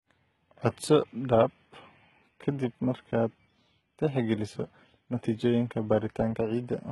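Throughout, the speech's treble sounds copied rather than real and stops near 11.8 kHz, with gritty, lispy s sounds, likely HE-AAC compression at a very low bitrate around 16 kbps. Unlike a plain low-pass, the top end stays bright but mismatched.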